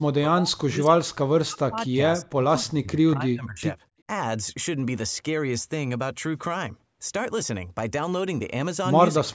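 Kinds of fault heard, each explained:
Speech suppressed in double talk: an echo canceller likely mistook overlapping talk for echo, so the speech dips sharply, by up to about 40 dB, across the first 3.6 seconds and at the very end.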